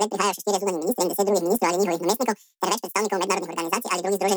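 From the first moment to the end, the speech plays at twice its proper speed and a full octave high, 12 semitones up. The audio has been read two samples at a time, a double-speed fault: the reader treated each pair of samples as one frame, so only half the frames exist and the timeline is squeezed to half its length.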